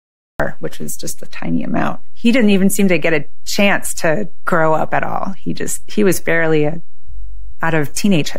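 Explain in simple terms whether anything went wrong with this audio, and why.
Two things went wrong. The first is a cut-off start. For the first 0.40 s there is nothing but dead digital silence, and then the speech appears abruptly at 0.40 s, already partway through a sound instead of building up from a natural beginning. The recording started late and missed the front of what was being said, so the opening is chopped off.

The second is a DC offset, present for the whole clip. The entire waveform sits off its centre line, as if pushed up or down by a fixed amount. You can't hear this directly. It wastes some of the room the signal has before it distorts, and it shows up as a constant, unmoving component at the very lowest end of the frequency range. It is typically caused by a small voltage leak or bias somewhere in the recording chain.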